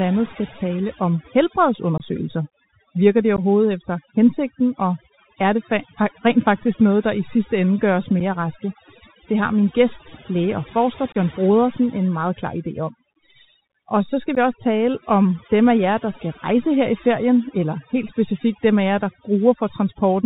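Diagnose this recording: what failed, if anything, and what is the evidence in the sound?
Call processing first: the noise reduction is overdone. Across the whole clip the background is pulled down, with little twinkly specks left where bands flicker on and off. It's cutting any frequency band that sits near its noise estimate, and the quieter parts of the speech get thrown out too.

Then the codec stage: this has the Bluetooth CVSD headset codec all over it. Nothing gets above 4 kHz, and there's a grainy hiss sitting under the speech throughout. Sibilants go scratchy, and louder bright sounds distort because the one-bit, 64 kHz up/down stream can't adapt its step size fast enough to follow them. The damage is plainly audible, not subtle.

On the radio link there's unconcealed Bluetooth headset packet loss, five spots: 1.98–2.01 s, 3.36–3.40 s, around 8.20 s, 11.12–11.17 s and 14.35–14.38 s. 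Each is a hard-edged hole of roughly 7.5 to 22.5 ms, with the level coming back a bit low right after. The gaps come in multiples of 7.5 ms, which fits a handful of small headset packets dropped each time and filled with silence or an idle pattern, no concealment.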